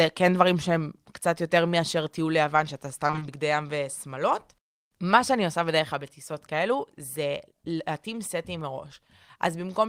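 From 3.07 to 3.23 s the speech turns choppy and briefly robotic, with small pieces missing. This is repeated packet loss: data kept arriving late or not at all over that stretch, and each hole was patched by stretching the last bit of sound. About half of that short span is patched audio. The breaks are no longer than 20 ms, which fits roughly four lost packets close together.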